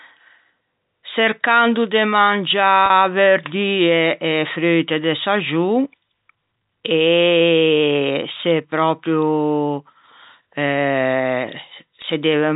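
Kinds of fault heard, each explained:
Packet loss with pitch repetition: at 2.86 s (40 ms) and 12.02 s (20 ms), lost packets were bridged by repeating the last pitch period, giving brief held, buzzy sound.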